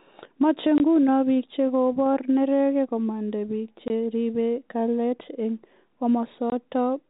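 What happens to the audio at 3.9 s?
Packet loss filled with silence hits from 3.88 to 3.90 s, right after "chekobor neregek komanda piik". A 20 ms stretch, which fits a single lost packet, was replaced by silence, leaving a brief hole in the speech with hard edges.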